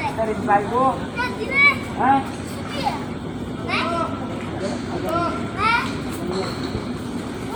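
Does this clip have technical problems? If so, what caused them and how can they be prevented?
No, there are no technical problems to point to in this recording of sounds. With nothing going wrong, there is no cause to trace and nothing here that needs preventing.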